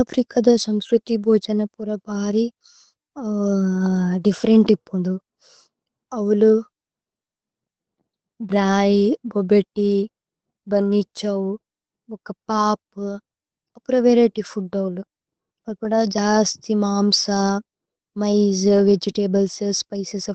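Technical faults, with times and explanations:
No technical faults are present, so there are no times or explanations to give.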